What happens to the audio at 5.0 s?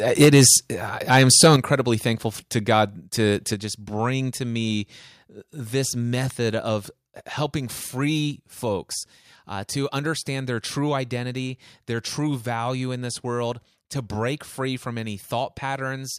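Nothing goes wrong at 5.0 s; the speech runs through that moment intact, with no dropout, click or other fault.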